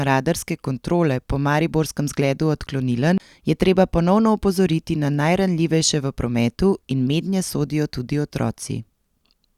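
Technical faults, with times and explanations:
3.18–3.20 s, CD skip: a short tick and a mute of roughly 20 ms, after which the speech resumes at "je treba ponovno opozoriti" from a different point on the disc. The laser jumped to another turn of the spiral, so playback briefly silences and picks up displaced in time. Unlike a plain dropout, which leaves a gap in otherwise continuous sound, the speech on either side of the tick does not join up.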